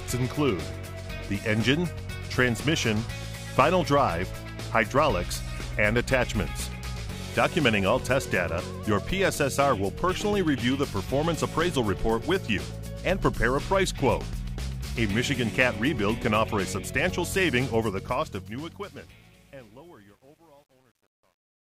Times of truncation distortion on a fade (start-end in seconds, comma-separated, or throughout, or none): 17.83-21.71